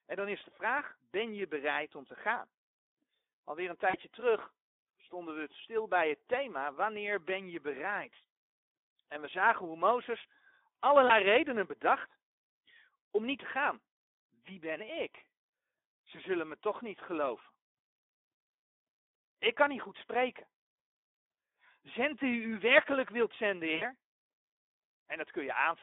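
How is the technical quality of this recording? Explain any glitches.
The recording has clearly audible low-bitrate speech coding throughout and three short dropouts covered by the decoder.

The Speex codec damage runs the whole length. The speech sounds hoarse and noisy, which fits a bitrate around 11 kbps. The excitation is coarsely coded, so harmonics smear into grainy noise. Energy sits between 300 Hz and 3.6 kHz. On a spectrogram, the harmonic stripes look blurred and nothing appears above 3.6 kHz. In the waveform, the fine periodic detail inside voiced stretches looks ragged.

The VoIP packet loss concealed by the speech codec occurs three times. The first is at 3.89–3.97 s, just before "terug stonden we stil", and points to two lost frames. The second is at 11.07–11.12 s, before "redenen bedacht", and points to one lost frame. The third is at 23.75–23.83 s, right after "u werkelijk wilt zenden", and points to three lost frames. 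In each case the decoder repeated its last pitch and filter while lowering the gain. The result is a brief buzzy tone or coloured noise that fades out. On a spectrogram these show as flat, frozen bands, and the waveform shows a decaying envelope.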